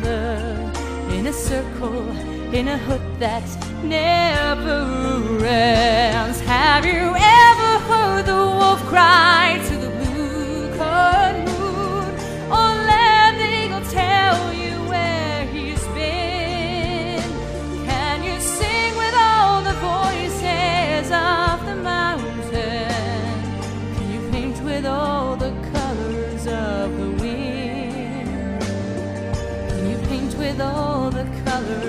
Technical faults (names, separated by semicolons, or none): none